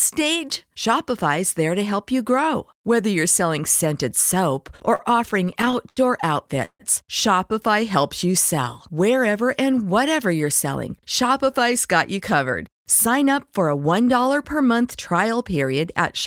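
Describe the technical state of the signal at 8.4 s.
At 8.4 s the speech is inside a jitter buffer slow-down running from 7.81 to 8.65 s. The receiver was rebuilding its reserve by repeating single pitch periods. Playback drops to about 96% speed, adding 43 ms. Sounds stretch slightly while pitch stays unchanged.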